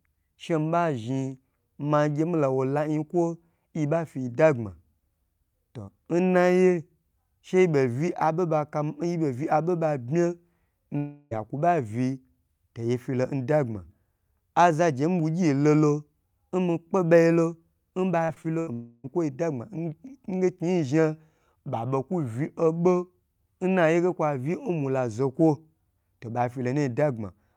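Speech with two stretches where the audio is replaced by a smeared continuation of the preceding sound: 10.97 to 11.33 s and 18.73 to 19.06 s. About 340 ms and 300 ms of signal are lost, with no silence in either gap, most likely a long network dropout each time, concealed by extending the last received audio. Just before the second dropout, from 18.25 to 18.69 s, repeated packet loss produces choppy, robotic sound: four separate holes, the longest 76 ms, are patched by concealment covering about a third of that span.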